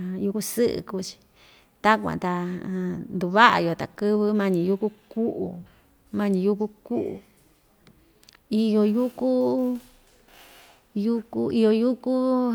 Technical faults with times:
2.13 dropped samples
4.29 dropped samples

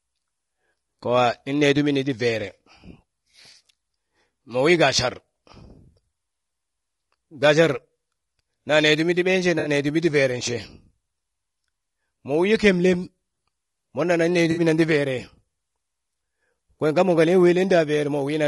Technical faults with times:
0.00-18.47 low-delay AAC compression
9.59-9.69 AAC frame loss with concealment
14.51-14.61 AAC frame loss with concealment

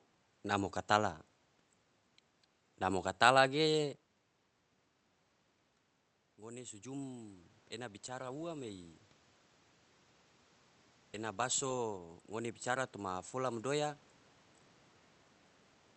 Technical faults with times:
6.37-7.52 automatic gain rising
11.16-13.36 automatic gain rising

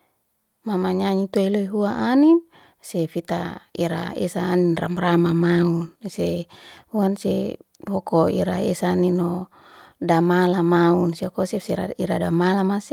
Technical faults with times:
none

